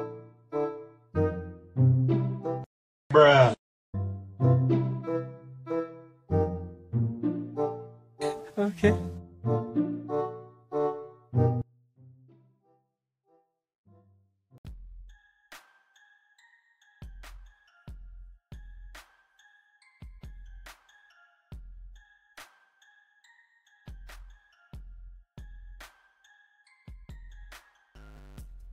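From 11.62 s to the end, the sound suddenly collapses to a faint trace, roughly 31 dB quieter than before. The centred material and the low end all but disappear, leaving only a residue of whatever differed between left and right. The likely cause is one channel inverted: one stereo channel has its polarity flipped, so when the two are summed to mono everything they share cancels out, and only their small differences survive.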